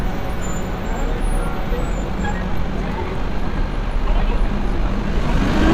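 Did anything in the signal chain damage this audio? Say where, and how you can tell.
Yes. From 1.88 s to the end of the clip at about 5.7 s, the sound abruptly runs at roughly 1.94 times its earlier pace while its pitch stays the same. This is a time-stretched section, likely from software compressing that span to fit a target length. The stretcher kept the pitch by discarding short slices and splicing the remainder together, which is why the passage sounds rushed rather than higher.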